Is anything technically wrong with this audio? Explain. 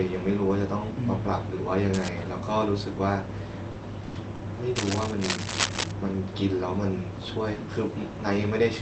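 Yes. The speech has three kinds of fault, all heard through a call path whose Opus coding stops the spectrum at about 8 kHz, which fits a low bitrate around 24 kbps.

Cable scratch noise appears from 1.93 to 2.09 s and again, much longer, from 4.76 to 5.92 s. It is a rough, crackling rustle sitting only a few decibels under the speech. It is likely caused by a worn cable, connector or control being moved, so that its contact resistance jumps about and injects irregular noise bursts. On a spectrogram it shows as ragged broadband speckle spread across the frequency range. The waveform gets a jagged, fuzzy envelope over those spans.

Short concealed packet loss hits at 3.71 s and 4.35 s. Each time, about 40 ms of audio never arrived, and the receiver patched the hole by extending the preceding sound, then crossfading back into real audio. Each event is heard as a brief smear or wobble, and a short sound can drop out. 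A spectrogram shows harmonics or noise stretched unnaturally flat for a moment. The waveform shows a too-regular repeated cycle.

A burst of packet loss runs from 4.03 to 4.18 s. About 120 ms went missing, and the concealment carried the last sound forward while fading it, giving a held buzz or hiss instead of silence. The speech then resumes with that stretch skipped. On a spectrogram there is a frozen, fading band of harmonics with no onsets, followed by an abrupt jump. In the waveform, a decaying, steady repetition replaces the normal speech envelope.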